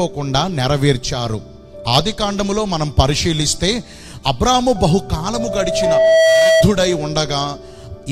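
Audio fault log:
5.34–6.67 s, loudspeaker feedback squeal: the microphone picked up its own loudspeaker, and the loop gain passed unity at 649 Hz, so that tone fed on itself, swelling over roughly a second to sit around 5 dB above the rest of the sound before the loop broke.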